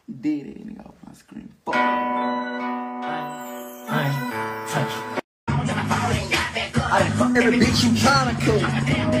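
From 7.36 s to 9.18 s a train of clicks rides over the sound: around twenty sharp, near-identical pops at roughly 12.7 per second, spaced unevenly, some peaking around 5 dB above the surrounding audio. The likely source is electrical interference or a faulty connection or power supply injecting short pulses. On a waveform they appear as thin spikes standing above the signal; on a spectrogram, as narrow vertical lines running through all frequencies at irregular intervals.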